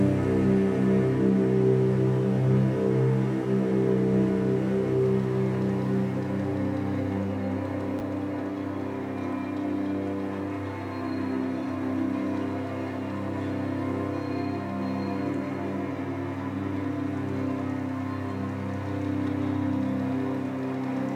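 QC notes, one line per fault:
7.99–8.01 s, chunks out of order: one block of about 10.67 ms arrives a single chunk late and plays after its successor, so two adjacent slices swap places. The three hard joins around the swapped pair produce a brief jumbled flutter. Unlike a dropout, no audio goes missing. Unlike a stutter, nothing repeats. The same material simply plays in the wrong sequence.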